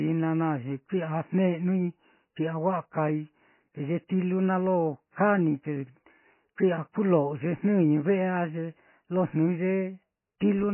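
MP3 compression runs from start to finish of this speech clip, and the damage is heavy. Nothing survives above 3 kHz, so the treble is simply gone, and the sound has a watery, swirling quality. That points to a very low bitrate, around 16 kbps, likely from MP3 encoding. Short of bits, the encoder cut the upper band outright and zeroed weak frequency lines, which flicker on and off from frame to frame.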